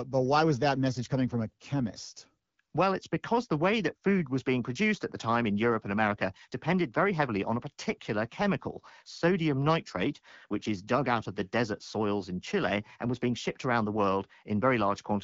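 No technical faults can be heard in this speech recording. It passes through an AMR wideband (HD Voice) codec at 12.65 kbit/s, which keeps the audio limited to about 7 kHz and leaves only light coding traces.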